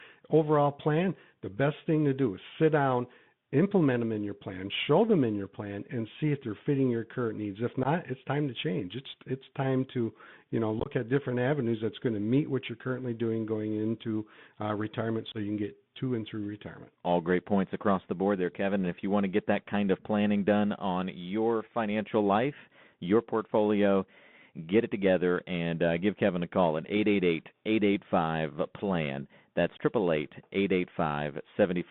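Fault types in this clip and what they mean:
Bluetooth CVSD headset codec: a narrowband one-bit delta codec running at 64 kbps, so the speech sits in roughly 150 Hz to 3.6 kHz with nothing higher. Its adaptive step lags fast loud changes, leaving plainly audible granular hiss, scratchy sibilants and distortion on louder high-frequency sounds.
Unconcealed Bluetooth headset packet loss: short voice packets dropped on the headset link and replaced with silence or an idle pattern rather than patched over. This gives abrupt holes at about 7.83 s, 10.80 s to 10.91 s (scattered, rougher) and 15.32 s.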